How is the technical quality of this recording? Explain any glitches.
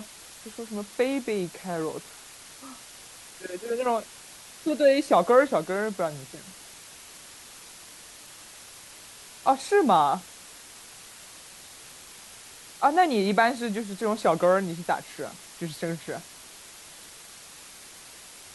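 The recording's quality is held back by a single fault that runs from start to finish. Low bit depth with dither, throughout the clip: the speech is stored with only 7 bits, and dither is added before each sample is rounded, so the rounding error becomes a steady, even hiss roughly 20 dB below the speech instead of distortion.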